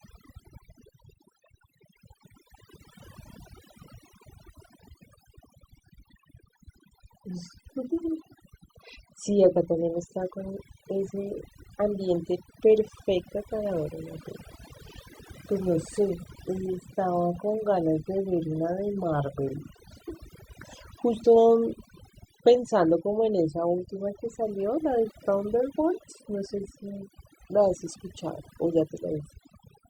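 Throughout, the speech sits over a near-silent background with twinkling specks: overdone noise removal, where aggressive noise reduction suppressed frequency bands, quieter voice detail included.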